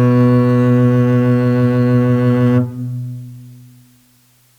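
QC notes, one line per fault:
Throughout: low bit depth with dither. There's a steady, even hiss sitting roughly 40 dB under the music, which fits a 9-bit signal. The dither turns the rounding error into flat white noise, so you hear hiss rather than gritty distortion.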